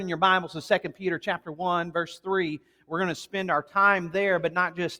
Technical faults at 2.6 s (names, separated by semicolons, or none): noise suppressor applied to music or sounds; sound cut by the noise suppressor